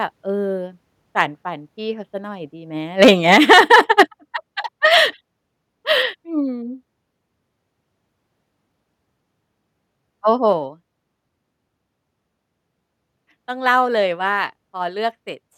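From 3.02 to 4.02 s the loudest speech peaks sound harsh and crackly, a microphone overload likely caused by input gain set about 5 dB too high. On the waveform, around two percent of samples are squared off flat at the converter's limit, and the spectrogram shows bright broadband smears above them. At 3.07 s the whole level, voice and background together, drops by about 2 dB, and at 4.08 s it drops again by about 5 dB. This is the microphone volume stepped down, likely by call software reacting to clipping. The waveform envelope shows two clean stair-steps, and the spectrogram dims uniformly at each step.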